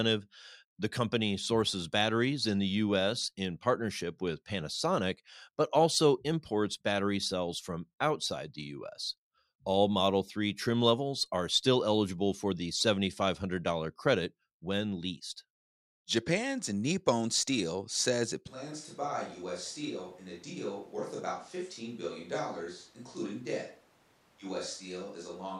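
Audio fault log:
18.48 s to the end, switch to a distant microphone: right after "says it" the speech suddenly turns roomy and hollow, thins out in the low end, and drops by about 10 dB, with room noise now sitting only around 25 dB under the speech. It never switches back. That abrupt change in tone and level is the sound of a far-off pickup, likely a camera mic, taking over from the close one.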